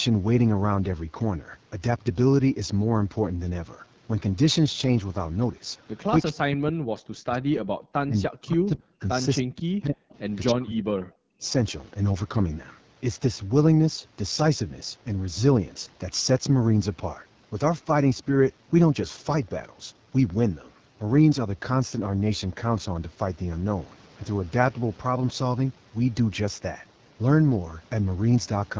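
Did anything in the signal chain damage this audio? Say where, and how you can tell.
Yes. At the codec stage, AMR wideband (HD Voice) coding at 8.85 kbit/s leaves the speech rough and raspy throughout. This low rate models the voice coarsely.

At the call-processing stage, the speech drops by up to about 40 dB from 6.22 to 7.83, 8.06 to 9.07, 9.42 to 10.13, and 10.52 to 11.47 s. The likely cause is speech suppressed in double talk by the echo canceller.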